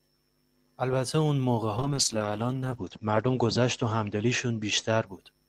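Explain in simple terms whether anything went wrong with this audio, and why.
Something did go wrong. At 1.79 s a call bitrate drop sets in. The connection had less room, so the speech was squeezed into far less data. The top end above about 8 kHz is cut away, making it sound muffled and rough. It never recovers before the end.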